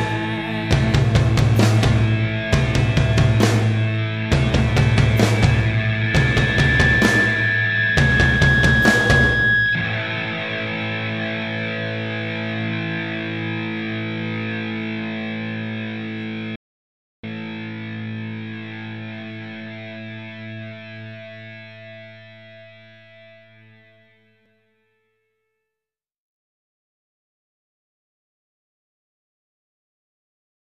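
At 16.56 s the sound cuts out to total silence until 17.23 s, an audio dropout to silence lasting about 0.68 s with no room tone. It was likely a lost input while recording continued. The waveform shows a flat line, and the spectrogram a fully blank column.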